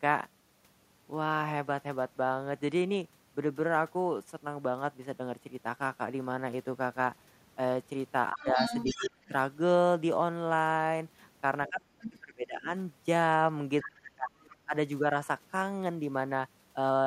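The speech dips sharply from 8.32 to 8.59 s, by about 20 dB, and more gently from 8.94 to 9.32 s. It drops almost out from 11.7 to 12.72 s and again from 13.83 to 14.32 s, by about 30 to 35 dB, with a brief dip at 14.65 to 14.73 s. This is speech suppressed in double talk, likely an echo canceller turning down everything while both sides spoke. Between 8.41 and 9.28 s a second voice comes through only slightly quieter than the talker, with faint scraps at 13.81 s and 14.42 to 14.56 s. This is the other side's voice leaking through, likely loudspeaker playback the canceller left in the microphone signal.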